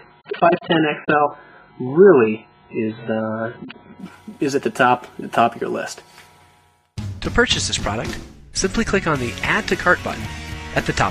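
For the first 4.0 seconds the sound is dull and boxy, with nothing above about 4.7 kHz, and what remains carries smeary, watery coding artefacts. At 4.0 s the full treble and clarity return abruptly, with no gap or dropout. This is an adaptive stream starting at a low bitrate: the player opened on a thin, heavily compressed version, consistent with an AAC encode around 8 kbit/s, then switched up, to something like 96 kbit/s, once it had gauged the connection.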